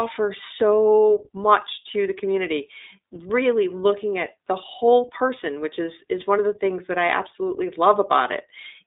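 The whole speech clip has passed through the iLBC codec, and its damage is plainly audible. The audio is confined to a telephone band of roughly 300 Hz to 3.7 kHz, so there is no brightness or sibilant detail above that. Each short frame's excitation is coded on its own, which gives the voice a slightly rough, synthetic grain. The character points to the 15.2 kbps mode with 20 ms frames.

At about 4.86 s, between "really looking at the" and "person which is is", there are lost iLBC frames: a single 20 ms packet went missing. The decoder covered the gap by repeating the last pitch cycle with some noise mixed in, producing a brief held, faintly buzzy vowel-like sound. Because iLBC frames do not depend on earlier ones, the voice returns cleanly right after the gap.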